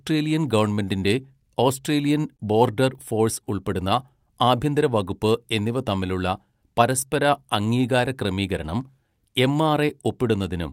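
Clock drift between sender and receiver runs through the whole speech clip: the sending clock is roughly 3 percent slow, so the receiver's jitter buffer keeps draining. Unlike a single network delay spike, the mismatch never settles; it produces small recurring hiccups at uneven intervals.

Repeated timing corrections follow from that, from 0.12 s to 10.54 s. The receiver repeats short slivers of audio to keep its buffer from running dry, stretching playback to about 98 percent speed and adding roughly 300 ms overall. All the edits go the same way, adding time rather than cutting it, which sets them apart from packet-loss concealment. They come across as a faintly unsteady, dragging tempo rather than gaps.

A short stall from a late packet occurs from 2.37 s to 2.41 s. The buffer ran empty, so the last sound was held for 22 ms until the packet arrived, and playback then resumed from the same point with nothing lost. 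The result is a brief smeared sustain with a slight buzz or dip. Unlike a dropout, nothing is skipped, and the delay grows by 22 ms.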